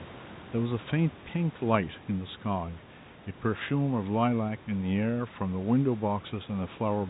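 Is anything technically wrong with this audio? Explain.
No, nothing is technically wrong.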